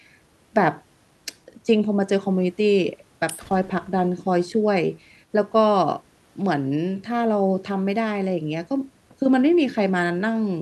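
A speech recording, with nothing technically wrong with it.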